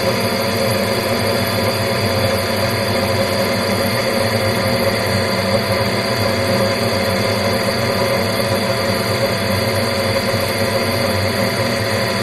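No technical faults are audible.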